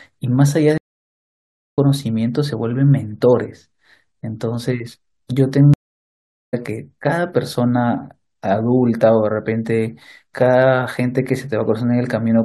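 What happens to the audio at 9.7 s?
Nothing goes wrong at 9.7 s; the speech continues cleanly through that moment with no dropout, click, distortion or other fault.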